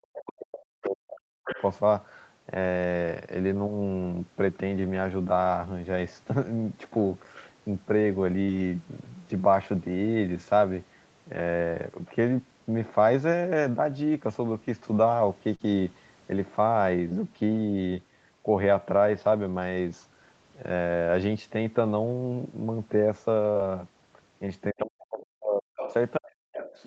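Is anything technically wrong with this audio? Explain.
Yes. There are three kinds of fault, all typical of a voice call.

Speech suppressed in double talk occurs from 0.00 to 1.59 s, from 24.72 to 25.71 s, and briefly from 26.18 to 26.31 s. The talker's level drops sharply, at its deepest by around 40 dB, so the voice fades or breaks into pieces. The likely cause is an echo canceller facing both sides talking at once. It could not tell the local voice from loudspeaker echo, so it turned everything down.

The other side's voice leaking through is heard in four places. There are short scraps at 0.53 to 0.60 s, about 15 dB below the speech, and at 1.46 to 1.65 s, about 10 dB below. A faint trace at 24.80 to 24.85 s sits about 30 dB down. A longer stretch from 25.77 s to the end runs about 10 dB below. This is likely far-end audio from the loudspeaker that the microphone picked up and the echo canceller failed to remove.

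Short concealed packet loss occurs three times: at 8.43 to 8.50 s, 15.55 to 15.62 s, and 23.51 to 23.58 s. Each time, about 40 ms of audio arrived too late to decode. The receiver filled the gap by extending the last sound, keeping its pitch if voiced or shaping noise if not, then blended back in. Each one is a brief smear or wobble, and a short consonant can disappear.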